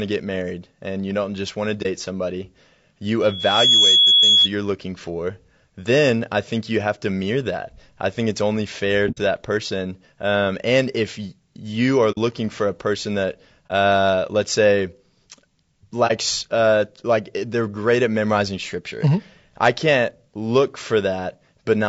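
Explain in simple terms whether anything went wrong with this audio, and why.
A few things did go wrong, yes. Throughout the whole clip the speech sounds rough and grainy, with a sort of hiss sitting between the tones of the voice and an artificial top end. That's low-delay AAC compression, most likely the AAC-ELD codec used in video calls. It works in very short chunks to keep the delay down, which makes it hard to capture the fine structure of a voice, and at this data rate the damage is plainly audible.

Then there's AAC frame loss with muting, which shows up as short, soft-edged gaps: around 1.82 s, 9.11 to 9.18 s, 12.11 to 12.18 s, 13.68 to 13.71 s and 16.07 to 16.12 s. The shorter gaps last about 30 ms and the two longer ones about 60 ms, which fits one or two lost chunks of data each time. The decoder had nothing to play for those chunks, so it faded the sound down to silence and back up again.

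There's also a loudspeaker feedback squeal from about 3.22 to 4.49 s. A microphone was picking up the loudspeaker it was feeding, and the loop kept amplifying a single pitch, here 3.4 kHz. The tone swells up over roughly half a second into a piercing whistle that sits well above the speech, and then it stops.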